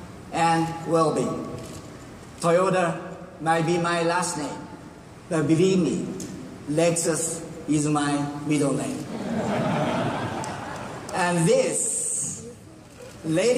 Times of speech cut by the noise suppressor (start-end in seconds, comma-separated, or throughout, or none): none